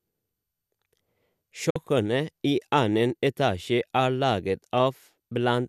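At 1.70 s the receiver loses valid digital frames and mutes until good data returns at 1.76 s. This digital broadcast dropout fades the speech out over about 8 ms into a 48 ms silent hole, which fits two lost frames, and that audio is gone.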